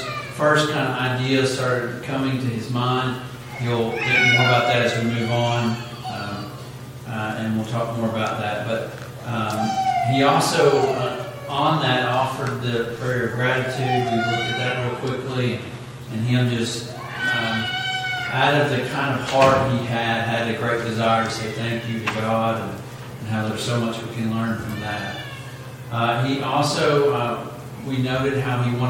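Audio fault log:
14.01–16.01 s, adaptive stream at a lower bitrate: for two seconds the sound abruptly loses its top end, with nothing above 12.3 kHz, and the remaining highs take on a thin, synthetic, swirly quality before full clarity snaps back. There is no gap at either switch. The sound fits the player briefly falling back from a 96 kbit/s AAC rendition to a 16 kbit/s HE-AAC one, whose band replication fakes the missing treble from lower frequencies.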